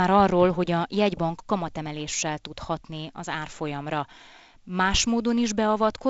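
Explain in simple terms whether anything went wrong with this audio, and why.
Nothing went wrong here, and no faults can be heard in this speech recording. It has passed through G.722 wideband telephone coding, which is working as intended: the sound reaches up to 7.7 kHz and no higher, with only the light coding roughness that this telephone system leaves behind.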